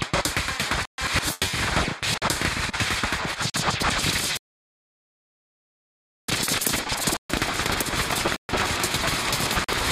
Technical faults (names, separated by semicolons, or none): block of digital silence; rebuffering stall